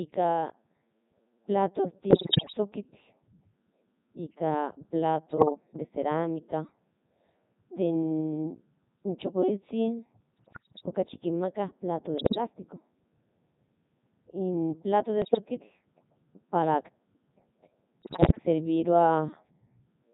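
Codec 2 vocoder, throughout: the speech has the robotic, buzzy quality of heavy parametric coding, which fits Codec 2 in its 3.2 kbit/s mode. Only pitch, voicing, energy and a coarse spectral envelope survive, and the decoder rebuilds everything from a bank of sine waves, so the original waveform is gone. Breath, room sound and fine texture vanish, and the voice sounds synthetic and hollow.

Bit errors on digital voice radio, at 2.10–2.57 s, 5.30–5.50 s, 10.34–10.86 s, 12.18–12.38 s, 15.22–15.38 s and 18.02–18.44 s: the synthetic voice lurches in pitch, loudness and tone colour, breaking into bleeps, warbles and garbled robotic noise. Corrupted bits of the kind a weak radio link produces, at several to around ten percent, reached a vocoder where every bit steers a whole frame's parameters. The 2.10 s and 12.18 s bursts are the worst.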